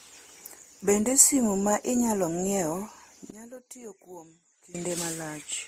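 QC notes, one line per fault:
Throughout, transcoding between lossy codecs: the speech carries layered coding artefacts heard together, with nothing above 15.8 kHz, likely from MP3, Vorbis and then Opus stages each re-coding the previous damage; a spectrogram shows a hard shelf at 15.8 kHz and blotchy, quantised upper bands.
3.30 to 4.75 s, one channel inverted: the speech drops by about 18 dB to a faint residue when summed to mono, likely because one channel's polarity is reversed so the shared centre cancels; the waveform shows a sudden collapse.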